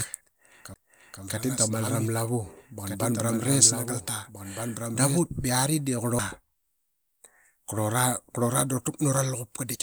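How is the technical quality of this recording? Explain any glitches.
The recording has two kinds of fault: a doubled audio track over the first five seconds and two brief CD skips.

From the very start until about 5.19 s, just after "kamaranga da", a doubled audio track is present. A second full-band copy of the speech runs roughly one and a half seconds behind the original, about 5 dB quieter, with no reverb or room colour. This is likely a slower capture path recording the same signal again. It sounds like a dry echo of each phrase. A spectrogram shows every speech pattern repeated at a fixed offset and weaker, and the copy cuts off abruptly at 5.19 s.

The CD skips come at 0.74 s and 6.19 s. A jolt or disc flaw sends the laser to another turn of the spiral, so playback mutes briefly and resumes at a different point. Each is heard as a tick followed by a sudden jump in the speech. The first mute lasts about 15 ms and the second only a few milliseconds. 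A waveform shows a short flat gap with a hard discontinuity on either side, and a spectrogram shows a thin vertical broadband line.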